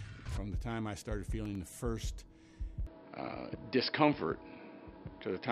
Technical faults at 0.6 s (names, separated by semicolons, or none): none